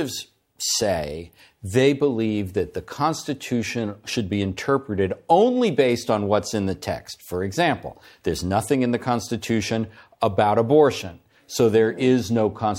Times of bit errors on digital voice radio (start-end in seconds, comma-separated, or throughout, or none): none